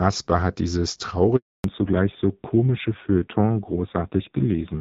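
At 1.36 s a handover gap begins. The call is switching networks, and no speech frames arrive during the move. The speech fades out within a few tens of milliseconds. Silence follows for 280 ms, until 1.64 s. Anything said then is gone.

From 1.64 s to the end there is a fallback to narrowband. Before this point, the light HD Voice coding keeps the speech clear. Now nothing above 4 kHz remains. The speech sounds dull, muffled and rough, which points to a low-rate narrowband codec mode.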